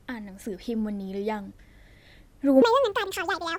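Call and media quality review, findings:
Section at the wrong speed, 2.62 s to end (3.59 s). Speech jumps to 1.79x speed, pitch up roughly ten semitones, hurried and high together. Likely a playback or resampling stage running this segment against the wrong clock.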